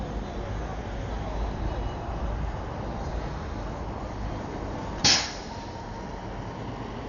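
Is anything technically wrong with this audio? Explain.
Yes. Throughout the clip there is heavy damage from what is likely Dolby Digital compression at a very low bitrate, around 48 kbps. The encoder has cut the band at about 6.9 kHz and left many frequency lines without mantissa bits, so the decoder fills them with dither noise. The sound is dull, with rough, fluttering noise around tonal parts.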